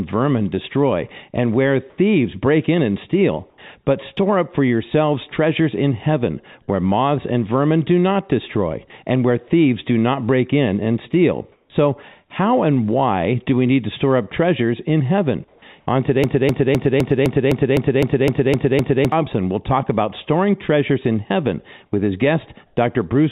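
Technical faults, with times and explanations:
1.90–1.98 s, 3.50–3.58 s, 11.52–11.70 s, 15.48–15.62 s and 22.66–22.76 s: comfort noise in place of the background. Pauses of 80 to 180 ms lose their real background, which sits about 35 to 49 dB below the loudest passages. A steady, featureless hiss replaces it, about 1 dB quieter or at the same level. This is likely because the sender stopped transmitting during silence and the receiver filled the gap with synthetic noise.
11.68–11.70 s: onset clipped by the voice detector. The sound returning after the 11.52 s pause starts abruptly, without its soft beginning. About 20 ms of its start is missing and comfort noise plays in its place. The sender's voice detector was likely slow to notice that sound had resumed, so those first moments were never transmitted.
16.24–19.12 s: broken-record loop. A 256 ms fragment repeats exactly and back to back, 11 times in all, so the sound stutters mechanically for nearly three seconds and whatever should have played there is lost. 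This likely comes from a stalled player, encoder or stream that kept resending the last piece it held.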